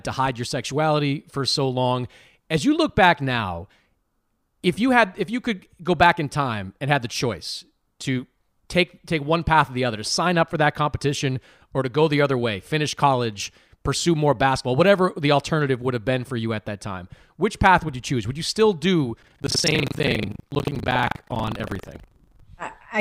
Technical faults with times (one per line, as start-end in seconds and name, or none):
19.20-22.42 buffer tearing